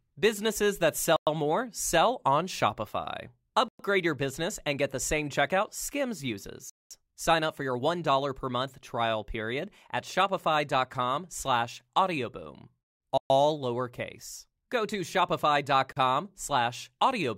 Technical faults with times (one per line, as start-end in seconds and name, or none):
1.16-1.27 Bluetooth stall
3.68-3.79 Bluetooth stall
6.70-6.91 Bluetooth stall
13.18-13.30 Bluetooth stall
15.92-15.97 Bluetooth stall